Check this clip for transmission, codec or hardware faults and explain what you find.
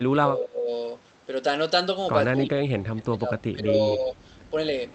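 One fault stands out: speech suppressed in double talk. It occurs twice, from 0.09 to 0.69 s and from 2.38 to 4.18 s. In both spans the speech level sinks sharply, by around 25 dB at its deepest. The likely cause is an echo canceller facing simultaneous talk from both ends. It cannot tell this talker from loudspeaker echo, so it turns both down. The audio carries the call codec's band limit near 8 kHz, which is not a fault.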